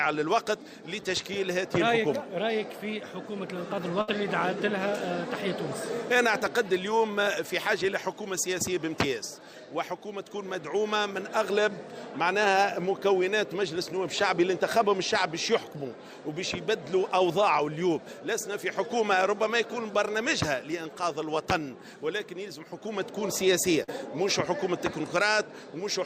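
Two network dropouts stand out. The first, at 4.01 to 4.09 s, is a burst of packet loss. About 60 ms of audio never arrived in time, so the receiver stretched the last thing it had over roughly 61 ms, holding it and fading it down. You hear a brief held, dimming smear, and then the sound picks up a little further along with that stretch gone. The second, at 23.83 to 23.90 s, is a short concealed packet loss. It's smaller: about 40 ms went missing and got patched with around 43 ms of continued, synthesised sound before blending back into the real signal. That comes across as a quick wobble or smudge rather than a gap, and anything very brief that fell inside that window is lost.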